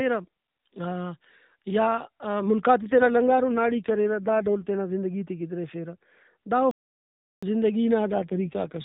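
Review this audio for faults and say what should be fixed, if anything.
The AMR rate drop occurs twice, from 2.82 s to 4.69 s and again from 8.12 s to the end. The audio keeps the same narrowband ceiling near 4 kHz and has no gap, but it turns audibly rougher and more synthetic. The degradation matches an AMR-NB stream moving from 12.2 kbps to 5.9 kbps. At the lower rate, fewer bits describe the excitation pulses, and the freed capacity goes to channel protection. To prevent it, improve radio link quality or coverage so the network does not need to lower the codec mode.

The playback stall runs from 6.71 s to 7.43 s, about 0.71 s of silence in mid-flow before the sound resumes. The gap points to the player's output buffer running dry, likely from late data delivery or a blocked audio thread, and the output stays silent until enough data arrives to continue. To prevent it, size the jitter buffer for the network's delivery variance and run audio output on a high-priority, non-blocking thread.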